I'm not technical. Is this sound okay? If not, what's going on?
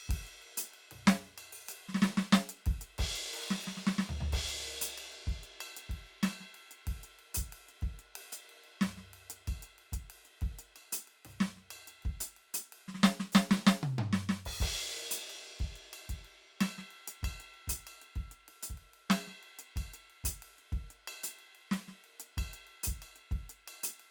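Yes, this music sounds fine, with no technical problems to be heard. There is no moment in the clip where anything goes wrong.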